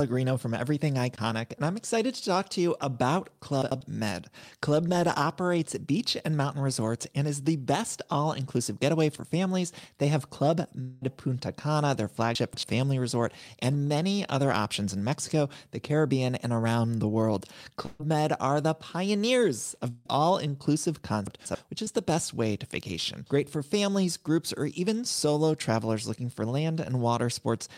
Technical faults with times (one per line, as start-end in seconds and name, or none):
3.62-3.81 chunks out of order
10.81-11.03 long network dropout
12.35-12.63 chunks out of order
17.85-18.01 burst of packet loss
19.61-19.78 loose connector crackle
19.89-20.07 long network dropout
21.27-21.55 chunks out of order
21.85-21.88 short concealed packet loss